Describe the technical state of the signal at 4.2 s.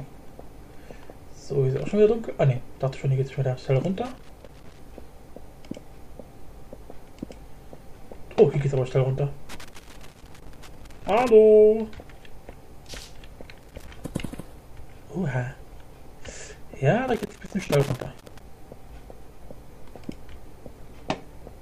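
At 4.2 s the signal is caught in a burst of loose connector crackle running from 4.05 to 4.79 s. A worn or dirty contact is making and breaking as it shifts, chopping the signal and adding pops wherever DC sits on the line, so the sound turns to irregular scratching. Unlike isolated digital clicks or steady vinyl surface noise, this crackle is erratic and clustered into one short, rough stretch.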